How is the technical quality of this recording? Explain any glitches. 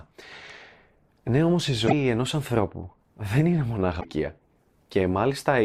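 Two brief glitches break up the speech. From 1.84 to 1.93 s, between "όμως η" and "ενός ανθρώπου δεν είναι", and again from 4.00 to 4.05 s, right after "ανθρώπου δεν είναι μονάχα", there is a short glitch, typical of damaged data in a compressed stream: corrupted frames make the decoder lose sync and jump to the next valid frame.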